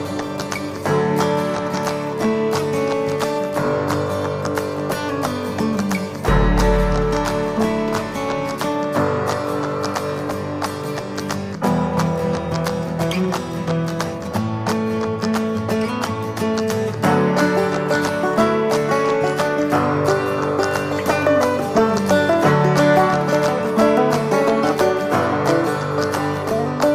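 No technical faults can be heard anywhere in the clip. Nothing in it calls for a timestamp or a repair.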